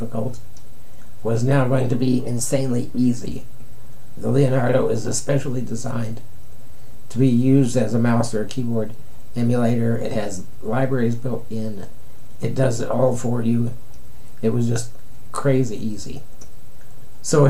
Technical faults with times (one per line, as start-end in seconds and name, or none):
1.92-3.17 drift correction step